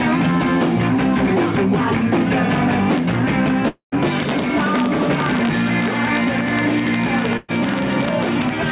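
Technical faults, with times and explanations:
Throughout: integer overflow. The loudest peaks go only about 1 dB past full scale, and well under one percent of samples are affected. Those samples aren't clamped at the ceiling. They wrap around to the opposite extreme, so each one becomes a full-range jump. On loud moments this is heard as brief, hard cracks, much harsher and more abrupt than clipping, because the waveform snaps across its entire range instead of flattening.
3.68 to 3.95 s: long network dropout. A stretch of about 240 ms drops out of the sound. The receiver first fills the hole by extending the last audio it had, which becomes a decaying buzz or hiss. The final 110 ms or so is silence. Playback then resumes at a later point, with the missing section gone. The likely cause is no packets reaching the receiver for roughly a quarter of a second.
7.37 to 7.51 s: burst of packet loss. 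About 120 ms of audio is missing, and the concealment covers the whole gap with no silence. The last sound before the gap is held and faded, heard as a sustained buzz or a dimming hiss. The audio then picks up further along, skipping the missing material. This fits a short run of consecutive packets lost or arriving too late, carried over the G.711 mu-law call path, which leaves nothing above 4 kHz.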